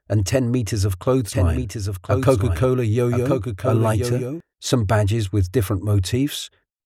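From 1.32 s to 4.40 s a doubled audio track appears: a second full-band copy of the sound runs about a second behind, roughly 5 dB quieter, likely from a slower capture path. Unlike an echo, it stays dry and steady, with no decay, and starts and stops abruptly.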